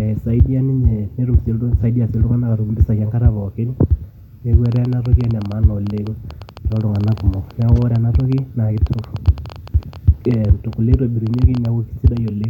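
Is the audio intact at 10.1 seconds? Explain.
No, 10.1 s sits inside a train of clicks running from 4.66 to 12.45 s. It's likely interference or a faulty connection injecting near-identical pulses, about 9.4 per second at an uneven pace, roughly as loud as the speech, ticking through pauses too.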